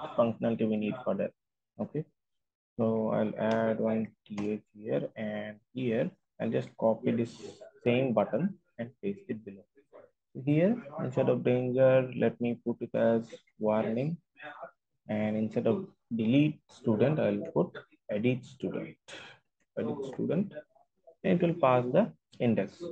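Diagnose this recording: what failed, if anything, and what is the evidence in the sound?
No fault detected anywhere.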